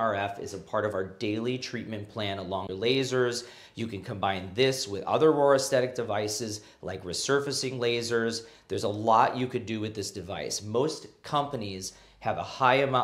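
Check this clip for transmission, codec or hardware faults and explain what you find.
One fault is audible: a CD skip from 2.67 to 2.69 s. The laser was thrown off its track, by a knock or a disc flaw, and landed on another turn of the spiral. The player briefly muted for roughly 15 ms while relocking and then resumed from that new position. The result is a short tick followed by an abrupt discontinuity, with the audio picking up a whole disc revolution or more away from where it left off.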